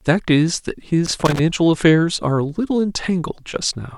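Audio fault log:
1.06–1.40 s: loose connector crackle. For about a third of a second the speech breaks into an irregular burst of scratchy crackle. A worn or dirty contact is intermittently opening and closing, so the signal is repeatedly chopped on and off at uneven intervals.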